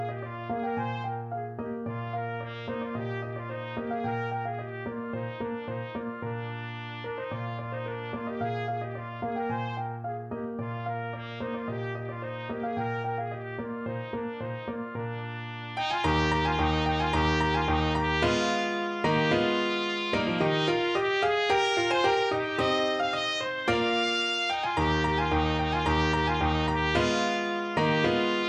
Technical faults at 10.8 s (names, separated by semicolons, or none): none